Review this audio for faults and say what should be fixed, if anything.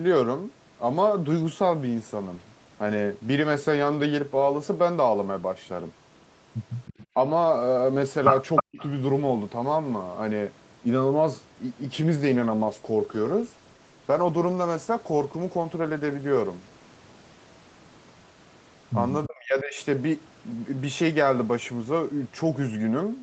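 Echo leak shows up three times in this speech: at 6.85 to 7.06 s, at 8.56 to 8.63 s, and at 8.79 to 8.87 s. Each time a delayed copy of the talker returns about 315 ms later. The first and last copies sit about 20 dB below the speech, and the middle one is nearly as loud as the speech. This is likely the far end's loudspeaker feeding its microphone past an incomplete echo canceller. A fixed 315 ms lag that repeats the same sound sets it apart from reverberation, which smears continuously rather than arriving as distinct delayed copies. Better canceller tuning, or a headset at the far end, would stop it.

Speech suppressed in double talk occurs at 8.62 to 8.81 s, where the level falls by roughly 40 dB for about 200 ms, and again at 19.26 to 19.79 s, where it falls by roughly 30 dB for about half a second. The first dip begins as the loud echo burst ends. The likely cause is the echo canceller mistaking overlapping talk for echo and ducking everything. 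Unlike packet loss, this comes from the canceller turning the voice down rather than from missing packets. Less aggressive suppression during double talk would prevent it.

A call bitrate drop runs from 12.18 to 17.09 s, with Opus falling from 32 to 18 kbps and staying at the lowest rate for about 4.1 s. Fewer bits mean coarser coding, so the speech turns rougher and more watery until the rate recovers. This differs from the steady codec character of the whole call, where nothing appears above 8 kHz, because this degradation starts and ends with the bandwidth estimate. Steadier network capacity, or a higher floor on the encoder bitrate, would prevent it.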